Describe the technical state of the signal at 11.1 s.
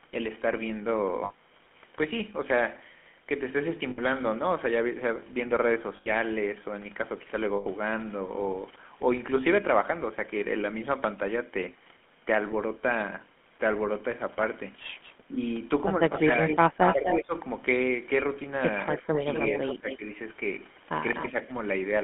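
At 11.1 s the speech sounds buzzy and gravelly, squeezed into roughly 200 Hz to 3.4 kHz throughout: GSM full-rate coding, its pulse-driven vocal-tract model fitting a 13 kbps stream.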